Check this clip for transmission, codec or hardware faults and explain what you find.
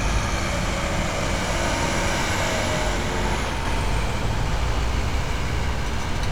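One fault is present: a doubled audio track from 3.65 s to the end. At 3.65 s a second copy of the sound cuts in abruptly, trailing the original by roughly 150 ms at about the same level. Its likely cause is a second capture through a slower path, or an edit leaving two copies out of step. The copy is full-band and dry, with no decay or room colour, so every event sounds twice like a slapback. On a waveform each transient has an identical twin about 150 ms later. A spectrogram shows every onset repeated at that fixed offset.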